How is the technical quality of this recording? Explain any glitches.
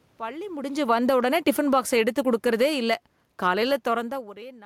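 There's one real glitch, and it's in the gain. From 0.62 to 4.24 s you get automatic gain falling: the gain control decides the input is too hot or its background noise too strong and gradually pulls itself down by about 10 dB, so the speech and the room noise under it sink together. The level shifts around 0.5 s and 4.0 s are just the talker moving relative to the mic.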